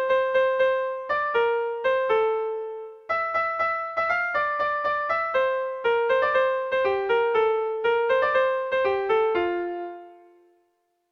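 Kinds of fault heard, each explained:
No faults can be heard anywhere in the clip.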